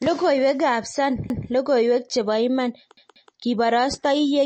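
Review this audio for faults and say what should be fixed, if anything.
The speech carries plainly audible coding damage throughout, likely from MP3 compression at a low bitrate, which fits something near 34 kbps. Nothing is present above 8.4 kHz, so the encoder has cut the treble at a fixed point. Weak frequency components are dropped and restored from frame to frame, giving a watery, swirling texture, metallic chirps on sibilants and softened consonant attacks. Encode at a higher bitrate or use a more efficient codec so the encoder doesn't run short of bits.

A repeated buffer occurs twice. From 1.30 to 1.49 s, just before "logoiwek chebo iman", one segment of about 186 ms plays a second time. From 2.97 to 3.34 s, just after that phrase, a segment of the same length plays two extra times. Each repeat has a hard join and is heard as a stutter. The length fits an 8192-sample buffer replayed because fresh audio arrived late. 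The repeats are inserted into the sound rather than replacing any of it. Give the playback or capture path more headroom, with larger queues or higher thread priority, so buffers are refilled before the device needs them.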